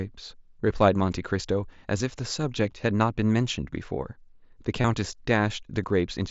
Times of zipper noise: none

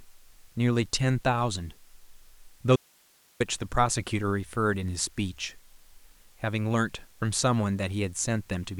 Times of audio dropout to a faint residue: 2.76-3.40

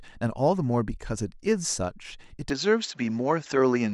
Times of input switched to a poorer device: 2.50-3.94

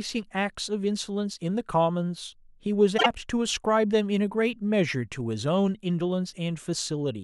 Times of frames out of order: 2.97-3.06

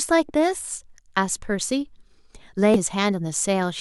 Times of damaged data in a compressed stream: 2.74

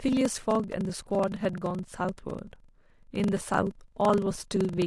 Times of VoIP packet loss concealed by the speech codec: none

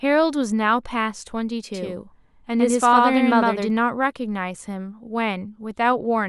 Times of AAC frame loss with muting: none

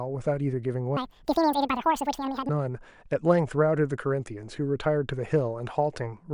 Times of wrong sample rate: 0.97-2.49

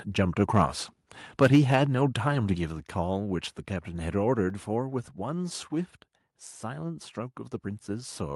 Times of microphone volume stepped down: 1.56, 2.55, 4.50

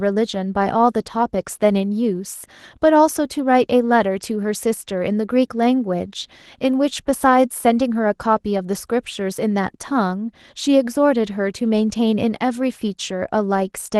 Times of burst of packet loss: none

